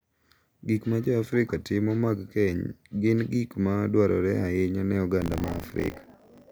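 From 5.2 s, right after "ma dwarore ahinya ne", the speech takes on a robotic 50 Hz buzz that lasts to the end: buffer tearing. The writer and the hardware reader have slipped and cross inside every 20 ms period, so a small slice of each buffer, around a sixth, replays audio from roughly 40 ms earlier. The waveform shows hard splices every 20 ms, and the spectrogram shows vertical lines at that spacing wherever there is signal.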